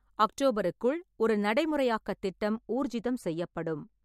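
From about 2.53 s, right after "அக்டோபருக்குள் ஒரு நடைமுறையாக்கத்", the speech turns dull and muffled through to the end at 4.04 s, as though a blanket were thrown over it. The cause is de-emphasis applied wrongly: a treble-cut filter meant to reverse pre-emphasis has acted on audio that didn't need it, tilting the response smoothly downward so that 10 kHz sits about 8 dB below 1 kHz, taking the crispness out of consonants and sibilance.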